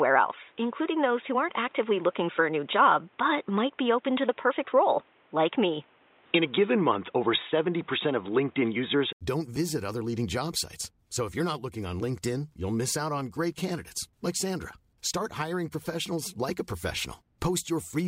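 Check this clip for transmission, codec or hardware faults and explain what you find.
One fault is present: the input appears switched to a poorer device for the first 9.21 s of this speech clip. Until 9.21 s, the audio has nothing above 3.8 kHz and sounds dull and boxy, with its own background noise roughly 35 dB below the signal. A gap of about 80 ms follows, then the sound clears up at "don't visit other leading". The likely cause is a change of capture device, such as a headset call profile, which passes a narrower band. On a spectrogram the opening section has a flat ceiling at 3.8 kHz, and the full band returns after a thin blank column. The waveform shows that short gap and a level change of around 5 dB.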